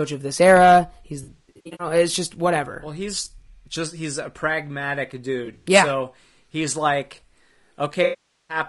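Low-delay AAC compression runs throughout, likely AAC-ELD at 32 kbps. Its short frames blur pitch harmonics, leaving the speech plainly rough and grainy. AAC frame loss with concealment hits from 1.23 to 1.87 s, before "it's just whatever", then from 5.45 to 5.66 s, after "just he's a pragmatic", and again from 8.03 to 8.57 s. Lost frames are filled from the last good spectrum, giving smeared, noisy patches in the first two.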